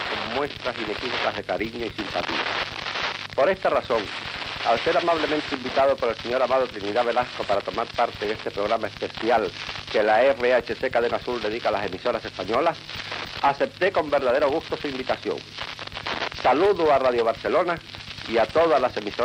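A click or pop recurs every 0.6 s from 0.45 s to 19.06 s, around thirty in all. This regular ticking is the signature of clock drift buffer slips, and the likely cause is two devices running on independent clocks that disagree by a few hundred parts per million. The buffer between them creeps until a handful of samples must be dropped or repeated, and each slip leaves a discontinuity.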